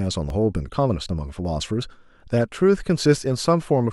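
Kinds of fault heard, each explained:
Dropped buffer (overrun): the speech has three small forward jumps in the sound, at 0.30, 1.09 and 3.18 s. Each skips about 20 ms with no silent gap. This is likely an overrun, where incoming samples were overwritten before being collected, so the audio on either side is joined directly. A waveform shows an abrupt step at each point. A spectrogram shows a thin vertical broadband line where the harmonic pattern breaks.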